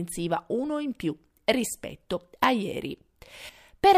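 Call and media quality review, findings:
No faults found in the speech signal: level, continuity and timing hold steady across the recording.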